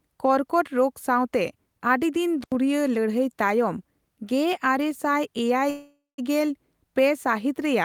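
At 2.41 s the speech is hit by an intermittent contact, running to 2.55 s. A loose connection in the cable or plug breaks the signal path for about 80 ms, so the sound drops out abruptly with a crackle at each edge as the contact opens and recloses. While the line is open, only faint hiss remains in place of the speech, before the signal snaps back.

From 5.70 s to 6.20 s there is a call audio freeze. The last fragment of speech is stretched into a fading buzz or hiss that lasts about 480 ms, with roughly the final 180 ms sinking to silence. When speech resumes it picks up exactly where it stopped, with nothing skipped, so the rest of the clip now runs about 480 ms late. The likely cause is packets held up in transit, leaving the jitter buffer empty so the receiver had to fill the gap itself.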